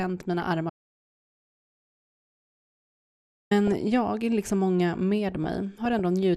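Too few bits for the whole clip, likely from MP2 compression at around 80 kbps, leave upper sub-bands switched off and the rest coarsely quantised, so the speech sounds dull, with a granular, gurgling edge throughout.

From 0.40 to 0.55 s, DAB burbling: bit errors slip past error correction into the audio data, putting short blips of noise into single sub-bands. It comes across as a brief patch of burbling over the speech.

From 0.70 to 3.51 s, an audio dropout to silence lasts about 2.8 s. The input appears to have been lost while silence kept being written, so the sound cuts off into dead silence with no room tone and returns mid-flow before "jag liksom många".

The same DAB burbling recurs from 3.67 to 3.82 s and again, at a lower error rate but over a longer stretch of frames, from 5.30 to 6.00 s after "jag liksom många", giving a longer run of noise blips in single sub-bands.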